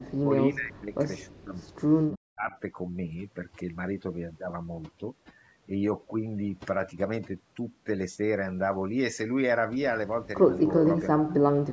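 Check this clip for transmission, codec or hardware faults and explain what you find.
Two faults are present: overdone noise removal across the whole recording, and repeated dips in the talker's speech at the start and end.

The overdone noise removal runs from start to finish. A noise reducer set far too aggressively has pulled individual frequency bands down to almost nothing whenever they sat close to its noise estimate, taking the quieter parts of the speech with them. The result is near-silent gaps sprinkled with twinkling, chirpy specks. Unlike plain low-bitrate codec smearing, the damage is tied to loudness: the soft parts of the speech suffer most.

The second fault is speech suppressed in double talk, at 0.00–0.30 s, 0.52–0.99 s, 1.28–1.58 s, 2.15–2.56 s and 11.15–11.72 s. In each window the talker's level collapses, by roughly 25 to 40 dB at the deepest, for a few tenths of a second at a time. 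The likely cause is an echo canceller that couldn't separate the local talker from loudspeaker echo while both sides spoke, so it turned everything down. These are short level dives inside otherwise continuous speech, not the clean silent holes of packet loss, and they bunch at the opening and closing, where exchanges overlap. The absence of anything above 8 kHz comes from the call's microphone processing and is expected.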